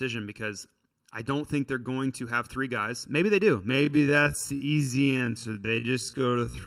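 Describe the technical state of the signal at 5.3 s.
At 5.3 s the speech sits inside a time-stretched section that runs from 3.67 s, just after "they do", to the end of the clip. The pace drops abruptly to about half speed while the pitch holds. It drags. This is likely software repeating short pieces to fill a longer span.

Channel delay (comb filtering) is also present here, as it is throughout. One channel lags by under a millisecond before the mono sum. Cancellations fall at evenly spaced frequencies from around 700 Hz, giving a hollow, phasey tone.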